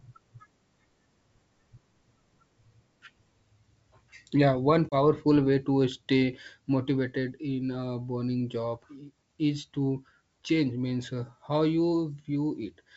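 Around 4.89 s there's packet loss on an ADPCM call. A few packets' worth, about 30 ms, drops to hard-edged silence. The decoder's predictor and step size lose track of the sender's, so the G.722 wideband sound returns slightly mangled until about 4.96 s.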